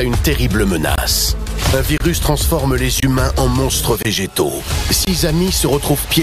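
Short, hard-edged holes of silence, each about 23 ms long, break the audio at 0.96, 1.98, 3.00, 4.03 and 5.05 s. This is a gap between chunks: the audio arrives in 1 s pieces and silence is inserted at each join, so nothing is lost.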